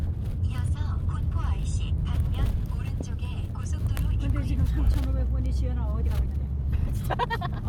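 A time-stretched section runs from 5.99 s to the end of the clip, where the pace abruptly jumps to about 1.94 times its earlier speed while the pitch stays where it was. This most likely comes from software compressing that stretch to fit a shorter length by dropping short slices of audio rather than resampling. As a result, this final portion sounds rushed.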